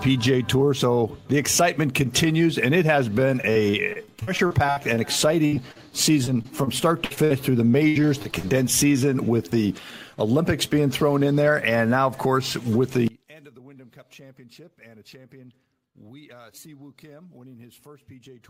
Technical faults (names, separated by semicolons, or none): repeated packet loss (robotic sound); one channel inverted